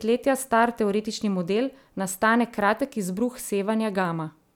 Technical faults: electrical switching spike

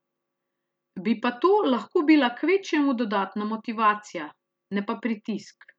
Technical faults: none

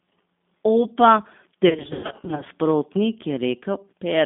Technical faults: G.729 codec; VoIP packet loss concealed by the speech codec

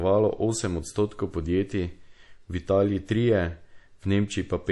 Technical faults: MP3 compression

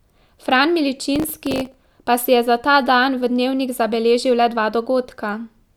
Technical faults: processor overload crackle

